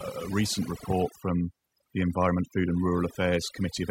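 A speech recording with overdone noise removal running through its whole length. The background has dropped, breaking up into twinkling specks where individual frequency bands flicker on and off around the noise estimate, and the quieter parts of the voice are stripped away with them. Unlike a noise gate, which opens and closes the whole signal at once, the dropouts here happen band by band and continuously.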